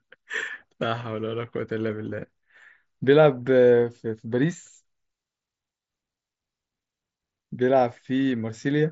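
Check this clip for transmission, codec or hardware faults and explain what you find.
No faults found; the speech comes through intact.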